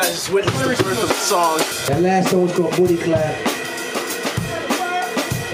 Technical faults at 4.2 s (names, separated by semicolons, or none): none